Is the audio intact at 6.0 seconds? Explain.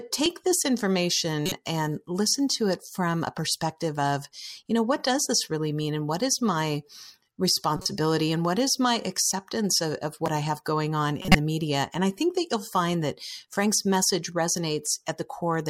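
Yes, at 6.0 seconds the speech runs on without any audible fault.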